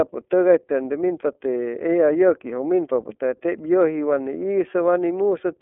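Throughout, the speech passes through the iLBC codec, likely in its 30 ms frame mode, leaving a 250 Hz to 3.5 kHz band and plainly rough, synthetic-sounding speech.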